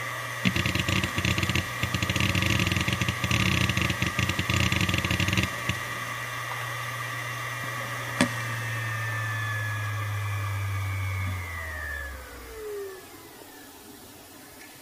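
Nothing in the recording stood out as a technical problem on listening.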